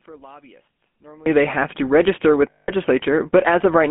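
A short speech recording heard through a GSM full-rate codec from start to finish, with a burst of lost GSM frames near the end. The codec damage is plainly audible. The voice has a buzzy, gravelly roughness because the codec rebuilds speech from a vocal-tract model excited by coarse, regularly spaced pulses, and the line band runs only from about 200 Hz to 3.4 kHz. A spectrogram shows energy cut off sharply above 3.4 kHz and a thin floor below 200 Hz, with grainy, pulse-striped harmonics. The result fits 13 kbps full-rate GSM. From 2.5 to 2.71 s the sound stops moving forward and hangs as a rough, metallic ring. The decoder replaced the missing frames by repeating the last good frame's settings, and the gap fits roughly nine lost 20 ms frames. On a spectrogram the formant pattern freezes into flat horizontal bands, and the waveform envelope stops following speech.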